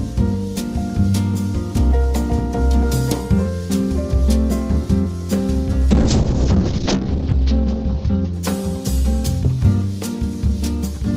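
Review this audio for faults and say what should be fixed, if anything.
A call bitrate drop runs from 5.91 to 9.14 s. The encoder falls from 48 to 9 kbps, and the audio bandwidth shrinks from 20 kHz to 8 kHz. For about 1.2 s at the lowest rate the sound turns coarse and muffled. To prevent it, stabilise the network path or improve bandwidth estimation so the encoder isn't forced into such deep rate cuts.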